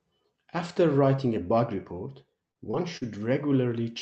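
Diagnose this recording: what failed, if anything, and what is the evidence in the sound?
Network packet loss produced scattered short gaps between 1.97 and 3.73 s: about three brief holes, the longest around 40 ms, each patched by extending the preceding sound into a tick or smear. Unlike buffer underruns, nothing drops to silence; concealment stretches the speech instead.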